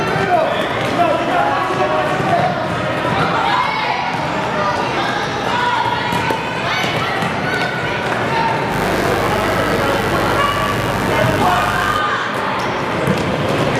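The audio carries a mains buzz from 8.69 to 12.01 s: a steady, raspy tone on a 50 Hz base with a dense stack of harmonics, sitting roughly 10 dB under the main signal. Sharp switching spikes twice per mains cycle, from a dimmer, rectifier or unshielded lead, would produce this.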